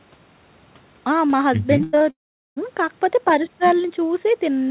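From 1.78 to 2.02 s, repeated packet loss left four short holes, the longest about 94 ms, each patched by stretching the previous sound. Over half that span is filled-in sound, so the speech turns choppy and robotic, with pieces missing.

At 2.10 s the sound breaks off until 2.58 s, most likely a long network dropout. The receiver briefly continues the last sound, which fades, and about 0.41 s of near silence follows. The audio then resumes without the lost part. Across the clip, the band stops at 4 kHz, which fits G.711 call coding.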